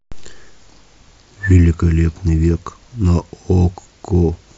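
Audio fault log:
Nothing in the speech stood out as a problem on listening.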